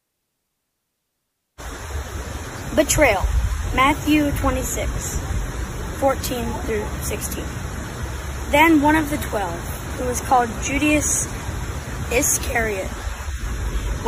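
No technical faults can be heard anywhere in this recording.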